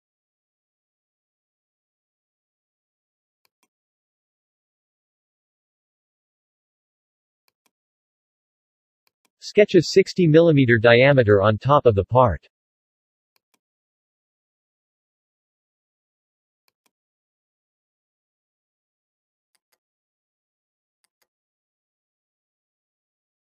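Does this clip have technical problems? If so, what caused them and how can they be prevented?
Yes. From 18.82 s to the end at 23.53 s there's planar audio read as interleaved, a robotic buzz at about 86 Hz. Each short block (roughly 11.6 ms, which fits 512-sample buffers) of left-then-right samples gets read as alternating pairs. Fix it by matching the reader's channel layout to the source format.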